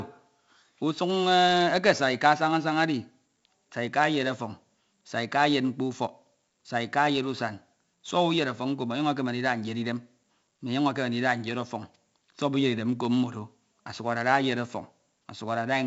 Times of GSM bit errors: none

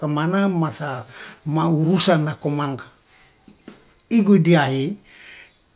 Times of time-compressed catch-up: none

